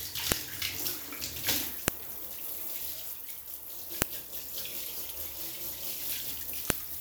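Sharp, loud clicks cut through the audio at 0.32, 1.88, 4.02 and 6.70 seconds, each lasting a millisecond or less. These are a file header played as audio: the clip was assembled from separate WAV pieces joined without stripping their headers, so a few dozen bytes of header data are read as sample values at each join. Because those bytes bear no relation to the surrounding signal, each produces an abrupt snap regardless of what the audio is doing.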